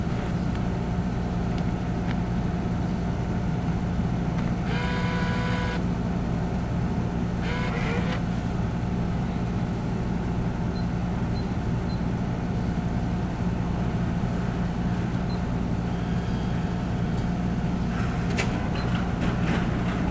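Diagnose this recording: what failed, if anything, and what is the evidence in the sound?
Nothing failed: the sounds come through the call path intact with no audible evidence of a fault, and the lack of content above 8 kHz fits a wideband call codec.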